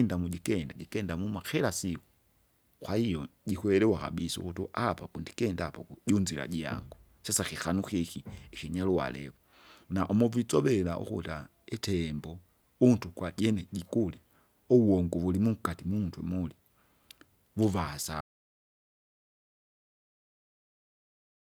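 At 18.21 s the speech cuts off mid-flow in an audio dropout to silence that runs the final 3.4 seconds to the end. The gap is silent with no room tone at all, which suggests the input was likely lost, through a disconnected device, failed link or mute, while recording carried on writing silence. On a waveform the trace collapses to a flat line; a spectrogram shows a clean vertical edge, then blank.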